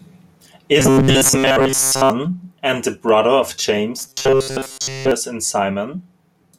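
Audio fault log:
0.80 to 2.10 s and 3.99 to 5.11 s: robotic sound from repeated short buffers. The speech turns into a stiff, metallic buzz locked at 134 Hz. It ends just before "and the brother of" and returns right after those words. That fixed tone matches a segment about 7.5 ms long being played over and over. The likely cause is audio arriving too slowly, so the playback repeated its last short buffer to fill the gaps. Most of the real signal in each stretch was replaced by these copies, so only the rough shape of the speech remains.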